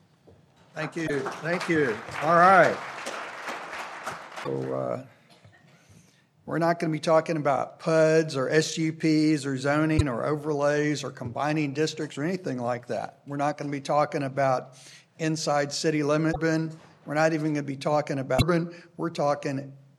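The audio has five short bursts of damaged data in a compressed stream. Each lasts 70 ms, at 1.03, 4.40, 9.94, 16.29 and 18.35 s. Corrupted bytes make the decoder misread frames and lose sync, producing brief chirps or blips.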